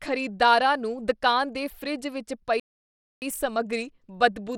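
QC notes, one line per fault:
Throughout: Bluetooth SBC compression. The speech carries a plainly audible gritty, grainy texture and the treble thins and flickers; coarse quantisation across a few fixed sub-bands starves the top bands, which fits roughly a 96 kbps SBC stream and sets it apart from a clean low-pass.
2.60 to 3.22 s: playback stall. Right after "ਦੁਕਾਨ ਦੇ ਫਰਿੱਜ ਵਿੱਚ" the sound stops dead for about 0.62 s and then resumes, likely because the player ran short of data. A silent dropout, unlike a packet-loss glitch or a splice.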